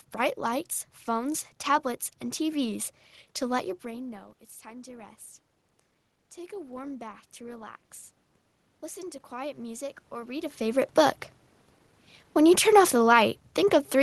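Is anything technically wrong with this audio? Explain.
Yes. There is automatic gain rising twice, from 3.82 to 5.26 s and from 6.35 to 7.8 s. Just after the talker moves back near 3.5 s, the level at the microphone drops by about 17 dB, and the gain control responds by raising its gain gradually, by about 3 dB and then about 4 dB. Voice and room noise swell together over more than a second. A talker moving would change the voice alone and leave the background steady.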